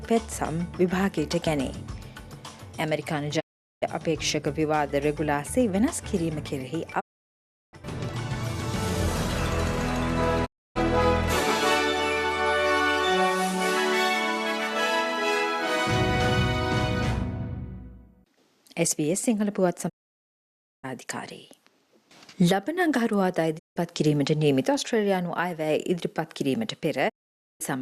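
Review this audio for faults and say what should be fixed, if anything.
Digital broadcast dropouts occur at 3.39–3.84 s, 6.99–7.75 s, 10.45–10.77 s, 19.88–20.85 s, 23.57–23.78 s and 27.08–27.62 s. Each time, the receiver stops getting usable frames and mutes with a quick 20 ms fade. The audio falls silent for 0.17 to 0.94 s and resumes further along, so whatever was transmitted during each gap is gone.

To prevent this, improve reception with a better antenna position, a stronger signal or a different multiplex, or record from a wired or streamed source instead.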